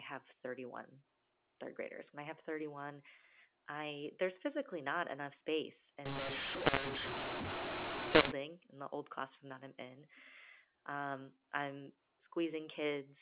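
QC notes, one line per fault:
6.06–8.32 s, mu-law and A-law mixed up: right after "physically not enough space" the audio turns harsh and gritty until "in the old classroom". The A-law telephone stream is being decoded as mu-law, so levels get scrambled and quiet moments fill with hiss.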